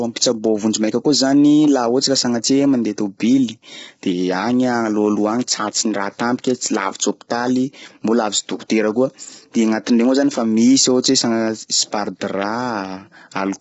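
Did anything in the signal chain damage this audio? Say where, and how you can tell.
Yes, at the codec: the speech is rough and grainy throughout, with nothing above 7.8 kHz. This is likely low-delay AAC compression, whose short frames blur harmonics at a bitrate that sounds around 16 kbps.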